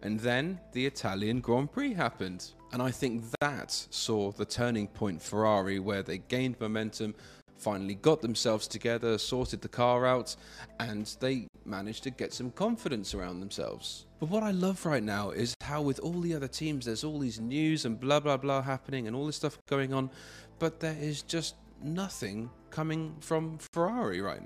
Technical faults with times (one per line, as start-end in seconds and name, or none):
3.35-3.42 gap at a join of encoded pieces
7.42-7.48 gap at a join of encoded pieces
11.48-11.54 gap at a join of encoded pieces
15.54-15.61 gap at a join of encoded pieces
19.61-19.67 gap at a join of encoded pieces
23.67-23.73 gap at a join of encoded pieces